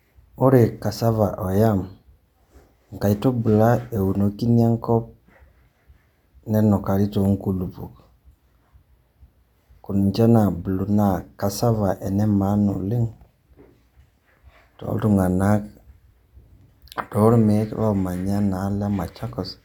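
No technical faults are audible.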